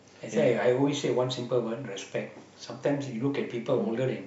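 No technical faults can be heard anywhere in this recording.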